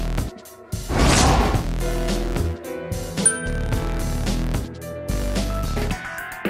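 No technical faults can be heard anywhere in the audio, and the signal stays steady and intact throughout.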